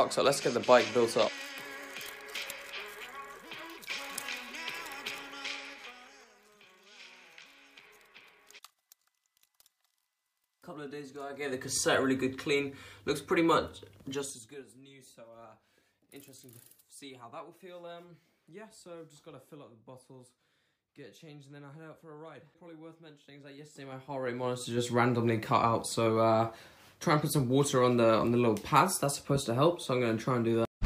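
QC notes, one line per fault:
11.24–11.80 s, 14.03–14.68 s, 23.50–24.89 s, zipper noise: the level moves in unsmoothed 3 dB jumps. It rises by about 15 dB at roughly ten steps a second, falls by about 25 dB at around fifteen a second, then rises by about 25 dB at roughly five a second. Each abrupt jump is a tiny click, so a ticking zip rides on the sound while the gain moves. The waveform envelope shows a staircase, and the spectrogram shows faint vertical broadband lines at each step.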